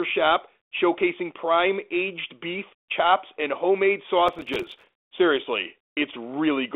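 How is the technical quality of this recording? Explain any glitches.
There's one real glitch, a processor overload crackle from about 4.28 to 4.93 s. The speech sits in a narrow telephone band, roughly 300 Hz to 3.6 kHz, with the light coding grain you'd expect from a G.726 ADPCM line, which fits 32 kbit/s.

During that stretch the processor couldn't keep up with its tiny buffers, each only a few milliseconds long. Dozens of deadlines slipped in a row, and every miss dropped a sliver of silence with hard edges into the signal. Strung together, those gaps come across as a gritty, tearing crackle over the speech for about two-thirds of a second. It stops once the load eases.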